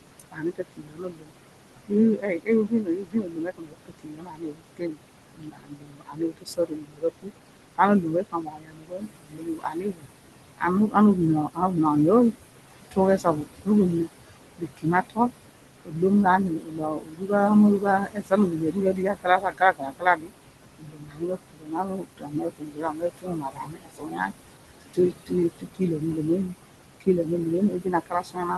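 Speech recorded over room noise sitting about 11 dB below the voice and sent through an Opus call path whose content stops near 12 kHz, carries noise suppressor artifacts throughout: the background is pulled down by about 21 dB between phrases and swells under them, seen on a spectrogram as blotchy, flickering noise patches. Speech cut by the noise suppressor occurs at 0.2–1.32 s, 1.88–10.95 s, 11.48–11.76 s, 12.32–15.31 s and from 15.85 s to the end, with drops of about 19–22 dB. Soft consonants, word endings or quiet phrases are swallowed, and the waveform shows clipped-off tails and gaps where faint energy should remain.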